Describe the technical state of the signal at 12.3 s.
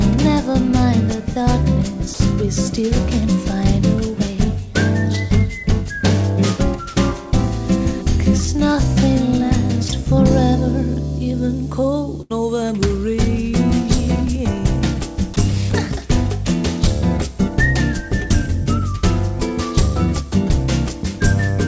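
At 12.3 s the signal is inside a burst of packet loss running from 12.22 to 12.32 s. For roughly 80 ms the receiver had no audio to play, so its concealment stretched the last received sound forward and attenuated it as the gap continued. This is heard as a brief held buzz if the last sound was voiced, or a fading hiss otherwise. Playback then resumes further along, with about 80 ms of the original sound skipped. The surrounding G.722 call audio stops at 8 kHz.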